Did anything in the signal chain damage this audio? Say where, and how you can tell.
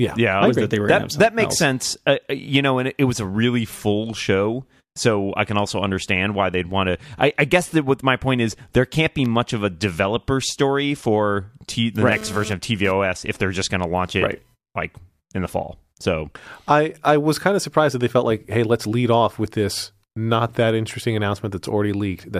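Yes. GSM phone buzz appears from 12.12 to 12.92 s, right after "the right" and ending before "if they're just going". The damage happened in the analogue wiring. A nearby 2G phone was transmitting in pulses about 217 times a second, and the audio circuit rectified them. The result is a raspy 217 Hz buzz with a dense row of harmonics, sitting about 13 dB below the speech and unrelated to it. It appears only briefly, which fits a phone sending data rather than holding a call.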